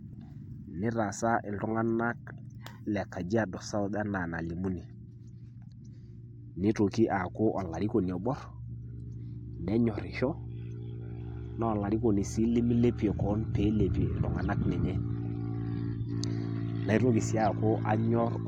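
No faults detected anywhere in the speech recording.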